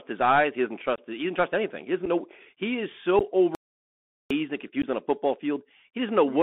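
Throughout, the speech sounds thin, scratchy and grainy, with s sounds rasping and a fine hiss underneath, the mark of the Bluetooth CVSD headset codec: a 64 kbps one-bit delta coder confined to roughly 200 Hz to 3.5 kHz, whose adaptive step lags loud, bright sounds.

Abrupt holes appear at 0.96 to 0.98 s, at 2.06 s just before "know he is", and at 3.19 to 3.22 s just after "doesn't know he is". Each hole is followed by a briefly quieter return. This is unconcealed Bluetooth headset packet loss, with 22.5 ms, 7.5 ms and 15 ms missing, about three, one and two packets.

From 3.55 to 4.30 s the audio simply stops for 755 ms, likely a playback stall where the player ran dry or its thread blocked.

At 4.82 to 4.86 s, just before "on a football", another 15 ms packet-loss hole cuts through.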